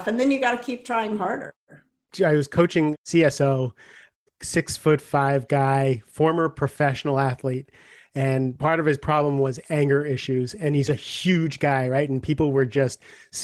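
Clock drift between sender and receiver runs through the whole clip: the sending side's clock is about 4 percent slow, so the receiver's jitter buffer keeps draining and must be topped up to avoid running empty. This leaves the speech slightly stretched and its timing faintly unsteady throughout.

Repeated timing corrections follow from that drift between 0.13 s and 13.29 s. The receiver keeps repeating short slices to stay in step, adding roughly half a second overall and playing the speech at about 96 percent speed, heard as small, unevenly spaced hiccups and a dragging tempo.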